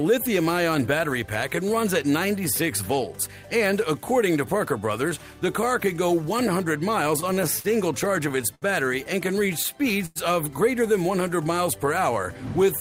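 From 6.95 to 7.67 s, and again from 8.16 to 8.65 s, the audio shows repeated stalls (stutter). Packets reached the receiver late, so its jitter buffer kept running dry and the last sound was extended each time. The first run has six gaps totalling 88 ms, the longest 45 ms. The second has four totalling 97 ms, with one of 70 ms. Nothing is lost, but the sound hitches and drags. On a spectrogram the held stretches appear as short, flat, horizontally smeared bands. The waveform shows repeating cycles that taper off in the longer gaps.

At 10.06 to 10.19 s there is a short stall from a late packet. A single packet missed its slot, and the receiver stretched the preceding sound for about 98 ms until it arrived. It then resumed from the same point, so no audio is missing and the timing is pushed back by about the same amount. This is heard as one sound lingering unnaturally long. A spectrogram shows a single frozen, streaked patch, and the waveform shows a brief run of near-identical cycles.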